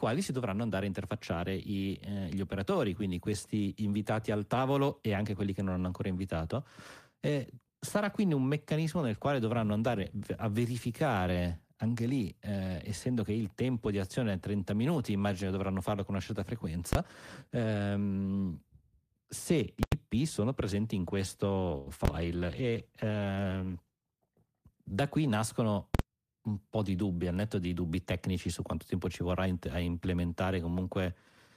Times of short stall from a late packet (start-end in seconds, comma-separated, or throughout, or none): 21.77-21.88